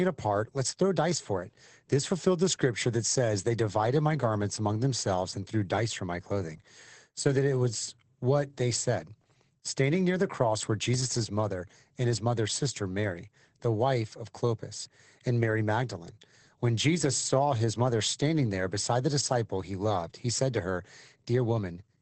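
From start to finish the speech carries Opus voice compression, and the damage is plainly audible. Nothing sounds above about 8.6 kHz, so the top end is cut off and the voice is dulled. The encoder sounds like it is running in its SILK linear-prediction mode at wideband, with a coarsely coded excitation that fits a bitrate around 12 kbps. That coarse excitation leaves the speech hoarse and slightly robotic.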